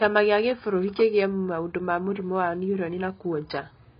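From start to finish the speech is band-limited, with nothing above about 5.3 kHz, and it sounds dull and smeared, with a warbling, fizzy texture on sustained sounds and sibilants. The cause is likely heavy AAC compression, where the encoder quantises each frame's spectrum coarsely, which fits a very low bitrate around 16 kbps. A plain low-pass filter would dull the top in the same way but leave the remaining band clean. Here the band itself swirls and churns.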